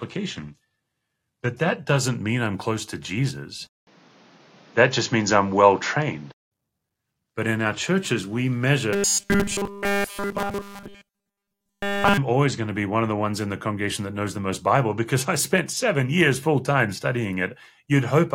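For the first 2.0 s the player is on a low-bitrate rung of an adaptive stream, started there to get going quickly before it had measured the connection. The early speech is thin and smeared, with stronger codec artefacts and missing or synthetic treble, which fits a low-rate HE-AAC stream of around 16 kbit/s. At 2.0 s the quality jumps with no gap, which fits a step up to AAC-LC at around 96 kbit/s.

From 3.67 s to 6.52 s the recording most likely comes from an input switched to a poorer device, where the system changed microphones or moved to a headset's call profile partway through. The switch opens with a 200 ms silence. After it, the speech turns dull and boxy, with a narrower band. The level shifts by roughly 5 dB, and a new background noise sits about 35 dB under the speech until the better input returns.

Between 8.93 s and 12.18 s the speech collapses into robotic sound from repeated short buffers. 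Fresh audio stopped arriving in time, and the software filled the gap by looping a tiny slice over and over while the real signal was skipped, with essentially all of this stretch made of repeats. The loop imposes a steady 200 Hz buzz, which points to a slice about 5 ms long, and the sound becomes a rigid metallic drone that only loosely tracks the speech.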